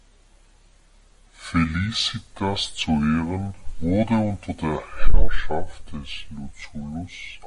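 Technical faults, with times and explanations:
Throughout, wrong sample rate: speech drags at two-thirds speed and sits seven semitones low, which fits 48 kHz audio played unconverted at 32 kHz.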